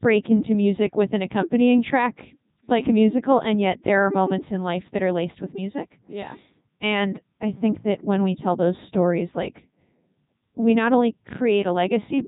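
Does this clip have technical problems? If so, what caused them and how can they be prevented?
Yes. Throughout the speech the Codec 2 vocoder has been applied. The voice sounds robotic and buzzy because the decoder rebuilds it from sine waves using only pitch, voicing, energy and a spectral envelope, so the original waveform is lost. The damage is heavy and fits the codec's top 3.2 kbit/s mode. On a spectrogram, energy stops sharply at 3.8 kHz, and the harmonics look unnaturally regular. The waveform no longer matches natural speech shapes. To prevent it, record or route the speech through a wideband codec at a higher bitrate rather than a digital-radio vocoder.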